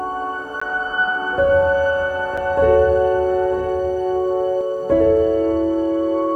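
At 0.6 s the music drops into a block of digital silence for about 15 ms. A stretch of samples went to zeros, which points to the output buffer not being filled in time. There's no fade either way, and at this length it comes across as a quick pop with a tiny hole in it. A second one hits at 2.37 s. That gap is only 5 ms, so it's more of a sharp tick.

From 1.15 s to 4.61 s there's a doubled audio track. A full-band copy of the music runs about a second behind the original and about 10 dB quieter. It has no decay and no room colour, so it doesn't sound like an echo or reverb. It switches on and off abruptly at both ends. The likely cause is the same signal being captured a second time through a slower path.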